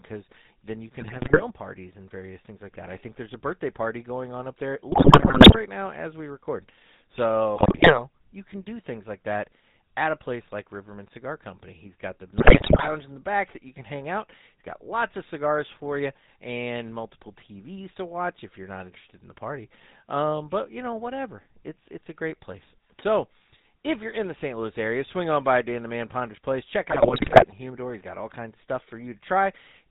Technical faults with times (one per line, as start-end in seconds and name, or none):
0.00-29.90 GSM full-rate codec
1.00-1.45 GSM bit errors
4.92-5.59 GSM bit errors
7.56-8.03 GSM bit errors
12.38-12.93 GSM bit errors
26.90-27.53 GSM bit errors